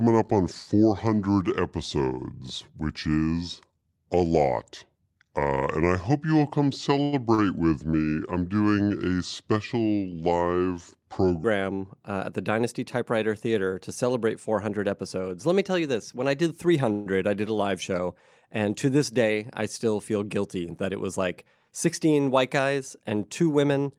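A section at the wrong speed runs from the start of this speech clip to 11.44 s. The audio plays at 0.72 times its proper speed, so the voice is slowed and drops by roughly five semitones, with tempo and pitch falling together. The likely cause is that this stretch was played or resampled against the wrong clock. Inside that slowed section are two short stalls from a late packet. At 7.03 to 7.14 s a sound is held for 90 ms, and at 7.34 to 7.40 s another is held for 37 ms. Each time the jitter buffer ran dry, and the receiver stretched the last bit of sound until the delayed packet arrived. It then carried on from where it stopped, so nothing is lost, but each sound lingers slightly too long. A call audio freeze occurs at 16.92 to 17.08 s. The last sound is continued for 136 ms and never drops into silence before the speech resumes exactly where it left off. This is likely packets held up in transit that emptied the buffer, leaving an inserted pause with no missing audio. 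A jitter buffer speed-up follows from 21.68 to 23.13 s. The speech runs at about 107 percent of normal speed while keeping its pitch, and it sounds slightly rushed. The buffer had built up surplus audio and cut many short pitch-period pieces in a row, around a tenth of a second in total, to bring the delay back down.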